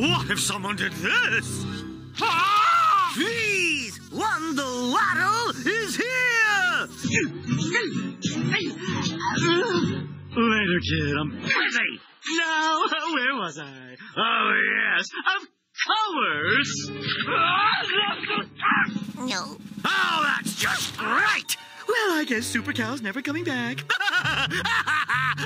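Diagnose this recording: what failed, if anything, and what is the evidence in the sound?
The network path let the adaptive stream fall back to a lower bitrate. The stream switches abruptly at 7.03 s and runs degraded for 12 s, recovering at 19.03 s with no gap either way. During that stretch nothing above 7.6 kHz remains, so the treble vanishes and coding artefacts thicken. That fits the player trading a roughly 128 kbit/s MP3 rendition for one near 16 kbit/s when throughput sagged, then stepping back up.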